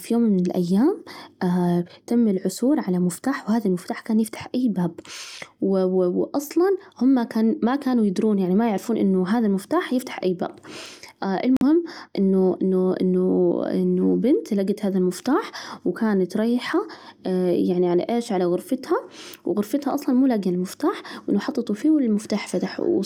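Audio packets were likely dropped on the Bluetooth link after arriving too late, a Bluetooth dropout. From 11.57 to 11.63 s the speech falls silent, losing about 46 ms, then continues at "إنه إنه إنه" as though it had kept playing.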